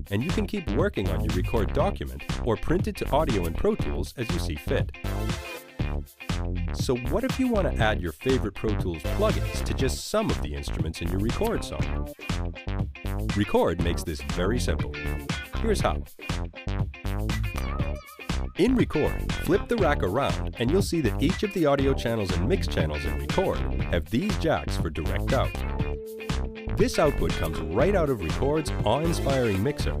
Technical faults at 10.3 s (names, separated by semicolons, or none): none